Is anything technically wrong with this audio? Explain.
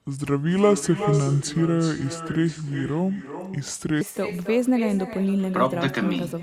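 Yes, there are two faults.

From 0.00 to 4.01 s the speech sounds deep, heavy and dragged out, about five semitones lower than natural, before snapping to normal pitch and pace. This is a section at the wrong speed, likely from being played back against the wrong clock. The audio runs at 0.722 times its proper rate, so every moment is stretched, and pitch falls together with tempo.

Throughout the clip, each phrase is trailed by a fainter, thinner copy, about 12 dB below the speech and arriving roughly a third of a second later. This is echo with no canceller: the far end's loudspeaker feeds back into its microphone, nothing strips that signal out, and it returns after the network round trip as a delayed shadow over the speech.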